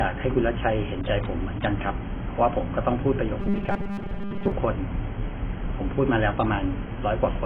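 From start to finish the speech sounds dull and smeared, with a fizzy, warbling edge on sibilants, the mark of AAC compression, likely AAC-LC at a very low bitrate around 16 kbps. A spectrogram shows a lowered cut-off and patchy, holed bands below it.

From 3.40 to 4.52 s the speech turns into a rigid metallic buzz at 200 Hz, robotic sound from repeated short buffers. The likely cause is a 5 ms chunk being replayed while most of the real audio is skipped. The waveform shows identical cycles, and the spectrogram shows evenly spaced harmonics of 200 Hz.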